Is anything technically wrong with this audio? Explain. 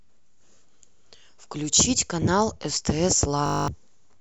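Yes. There is a system hang loop from 3.46 to 3.68 s. The playback side froze while the audio hardware kept replaying its ring buffer. The same 20 ms slice of speech repeats exactly, about eleven times. Because the loop is so short, it fuses into a steady buzz at 50 Hz rather than a stutter. The speech that should have played there, about a fifth of a second, is lost.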